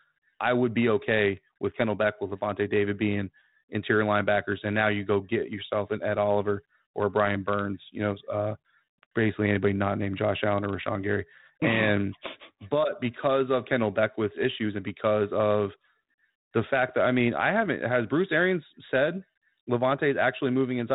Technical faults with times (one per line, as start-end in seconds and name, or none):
none